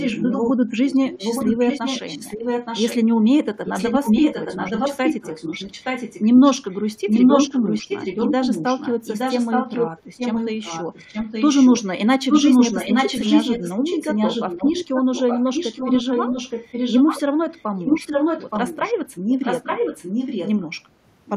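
An echo leak, likely from a far-end loudspeaker whose echo canceller let part of the microphone pickup back into the call, runs through 0 to 0.52 s, 0.89 to 2.97 s, 3.65 to 11.82 s, 12.3 to 17.21 s, 17.56 to 18.94 s, 19.29 to 20.64 s and 21.26 s to the end. A copy of the speech trails 871 ms behind, a little quieter than the direct sound, as loud as it from 12.3 to 18.94 s, and faint at the very end.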